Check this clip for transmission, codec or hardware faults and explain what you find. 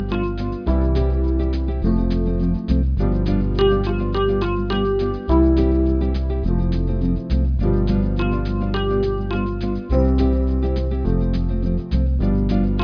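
Nothing here points to a transmission, codec or hardware problem; the audio runs along steadily with no dropouts, glitches or odd interruptions anywhere in it.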